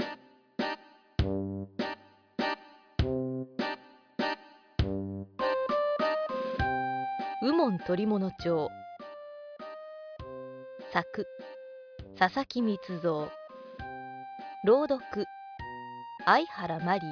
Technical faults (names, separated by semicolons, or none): none